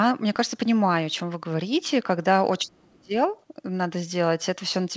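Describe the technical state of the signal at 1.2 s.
At 1.2 s the speech is intact, with only the band limit of a wideband call codec such as G.722, which leaves nothing above 8 kHz.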